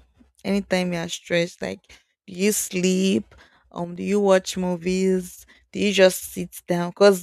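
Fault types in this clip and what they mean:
Sudden gain jump: from 3.84 to 3.96 s, speech and background noise drop together by about 6 dB without any ramp, likely from an instant digital gain change.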